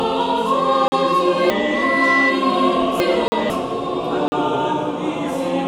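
At 0.88 s the sound drops out completely for 40 ms and returns at full level, a block of digital silence. Both edges are hard steps. Unlike a fade or packet-loss concealment, nothing smooths the edges: the level falls to silence and jumps straight back, giving a short hole.

From 1.5 s to 3.5 s the audio comes out of sequence: chunks out of order. A 500 ms chunk was delivered three chunks late, so it plays after material that should follow it. What sets this apart from a dropout or a repeat is that nothing goes missing and nothing plays twice. Every piece is there, but the passage sounds jumbled, with three hard joins where unrelated audio meets.

Around 3.14 s a loudspeaker feedback squeal appears. It is a single 2 kHz tone that swells over about a second and ends up a few decibels above the rest of the sound. At that one frequency the microphone-to-loudspeaker loop had a gain above one, so the tone built on itself. 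Unlike a steady interference whistle, it grows rather than sitting at a fixed level.

Two more 40 ms blocks of digital silence follow at 3.28 s and 4.28 s. Like the first, each is a clean cut to silence, which separates them from softer, concealed gaps.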